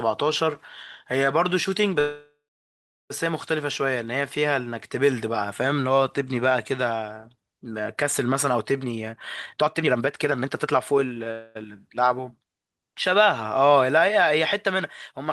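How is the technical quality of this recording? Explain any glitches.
The recording has three glitches in the speech: two call audio freezes and one jitter buffer speed-up.

From 1.99 to 3.12 s there is a call audio freeze. The last sound carries on as a fading buzz, then goes silent for about 0.74 s. Speech resumes where it stopped. Nothing is lost, but the stream now runs about 1.1 s later. The likely cause is delayed packets draining the jitter buffer. A shorter freeze follows at 11.31 to 11.57 s. It fills 240 ms with a fading buzz and never reaches silence.

From 8.83 to 11.27 s comes a jitter buffer speed-up. The speech runs at about 142% of normal speed, yet the pitch stays the same. It sounds hurried. The receiver had built up more queued audio than it aims for. It trimmed tiny pitch-period slices over and over to catch up. In total it cut roughly a second.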